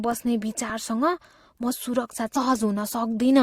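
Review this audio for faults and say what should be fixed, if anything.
At 2.35 s, just after "म सुरक्षा", a stream segment was likely skipped: one chunk of the segmented stream failed to load and the player moved straight on to the next. The speech jumps abruptly forward with a brief blip, leaving part of the programme missing. Buffering segments further ahead and retrying a failed fetch before advancing would prevent this.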